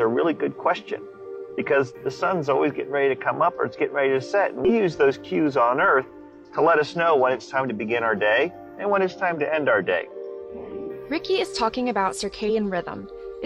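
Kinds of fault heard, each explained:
Damaged data in a compressed stream: corrupt frames throw the decoder out of sync until it resynchronises, giving short blips at 1.54, 4.65 and 12.45 s.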